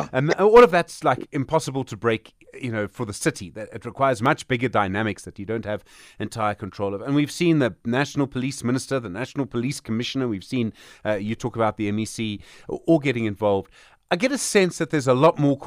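Speech with three sharp clicks: at 4.26 s after "it requires", 8.83 s after "seen the national police", and 11.29 s after "seen uh". Each is likely dropped samples, a fraction of a millisecond missing, so the waveform jumps abruptly, drawing a thin vertical spectrogram line.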